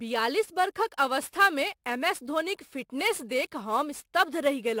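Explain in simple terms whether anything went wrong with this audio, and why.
Sample clock jitter: the converter's clock wobbled by roughly ten microseconds, so the speech carries a rough hiss throughout, strongest on loud, bright sounds.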